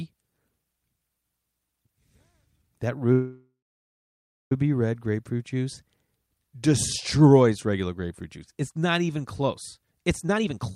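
At 3.12 s the speech stops and a call audio freeze fills the next 1.4 s, to 4.52 s. The last sound is drawn out briefly as a fading buzz, then about 0.98 s of silence follows. Packets were likely held up in transit until the jitter buffer ran dry. When they arrive, speech resumes exactly where it stopped, with "red grapefruit juice". Nothing is lost, but everything after sits about 1.39 s later.

From 10.23 s to the end at 10.75 s there is a jitter buffer speed-up. The buffer had accumulated more audio than its target, so the receiver repeatedly cut short pitch-period-length pieces to reduce the delay, removing roughly a third of a second. Playback runs at 150% speed with unchanged pitch, so this final stretch sounds noticeably rushed and clipped in rhythm.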